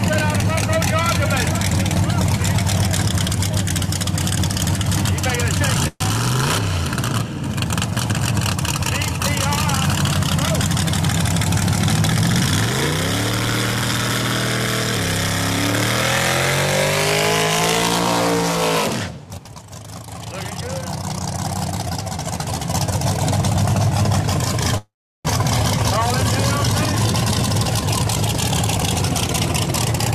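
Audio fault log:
5.87–6.03 s, 24.78–25.28 s: call audio freeze. Likely delayed packets emptied the jitter buffer. The last sound stretches into a fading buzz, then goes silent (40 ms, then 360 ms) before resuming intact. On a spectrogram, a smeared flat band fades into a blank gap.
18.89–19.60 s, 27.21–30.06 s: jitter buffer speed-up. Repeated pitch-period cuts trim roughly 0.1 s and 0.4 s, so the audio runs 14% and 13% fast at unchanged pitch. Harmonics stay level while the waveform looks compressed.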